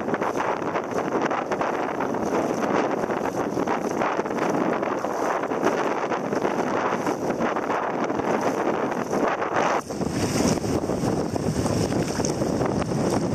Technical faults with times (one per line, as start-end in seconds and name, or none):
none